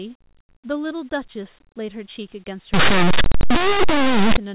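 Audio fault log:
2.74–4.37 s, linear audio read as companded: plain linear 8-bit samples are decoded as if they were mu-law codes, so small values just on one side of zero become the largest outputs while those on the other stay small. The result is sudden, very loud, harsh distortion that ignores the signal's level. It is loud and switches on and off abruptly with this span.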